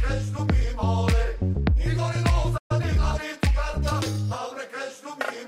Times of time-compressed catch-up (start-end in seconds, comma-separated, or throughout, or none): 2.71-3.19